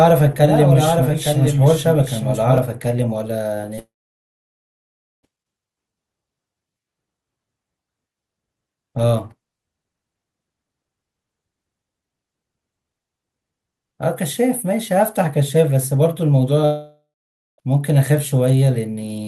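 A speech recording opens with a doubled audio track already under way. A second full-band copy sits roughly one second behind and about 5 dB quieter, with no room colour, and it cuts off abruptly at 2.58 s, likely from a slower capture path or a misaligned edit. From 3.75 to 3.79 s, short concealed packet loss produces a brief smear where the receiver extended the last sound to cover about 20 ms that never arrived. It runs straight into a long network dropout from 3.79 to 5.25 s. The concealed tail fades quickly, leaving about 1.3 s of silence before the audio resumes with that section missing. A second long network dropout from 16.65 to 17.6 s behaves the same way, with a fading tail and then about 0.5 s of silence. Both are likely the result of a stretch of lost packets.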